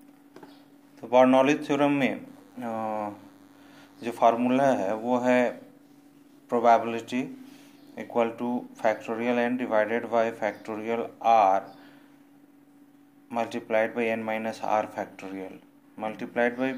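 A nearby DECT cordless phone or base station is sending a short radio burst every 10 ms, and the recording's audio circuit is rectifying that energy into the signal. The result is DECT cordless phone buzz from 2.27 s to 4.29 s: a steady, thin buzz at a 100 Hz repetition rate, rich in harmonics, sitting roughly 35 dB below the main sound for those two seconds before it stops.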